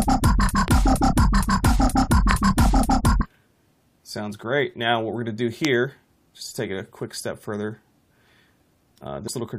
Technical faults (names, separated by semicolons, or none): loud pop; damaged data in a compressed stream